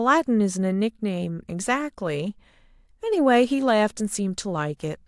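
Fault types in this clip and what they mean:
No faults detected; the speech recording shows no audible technical defects.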